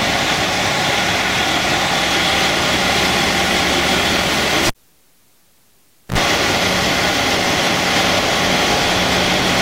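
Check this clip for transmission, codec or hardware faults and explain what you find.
Two faults are present: a grainy, coarse distortion across the whole clip, and a cable being pulled and reinserted in the middle.

Low bit depth without dither runs throughout. The signal was likely truncated to very few bits with no dither, consistent with about 9 bits, so the rounding error follows the signal. Quiet passages sound gritty and granular, with distortion around 45 dB below the sound that shifts as the sound changes.

A cable pulled and plugged in occurs from 4.67 to 6.18 s. A live connection breaks with a pop, leaving near silence for about 1.46 s. A 64 ms burst of 60 Hz mains buzz comes through while only the tip touches, then another pop as the sound returns.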